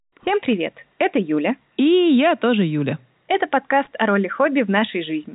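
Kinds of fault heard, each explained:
No faults can be heard in the speech. It comes through the G.711 telephone coding path, which passes nothing above about 3.8 kHz, so the voice has the narrow, band-limited sound of a fixed-line phone call.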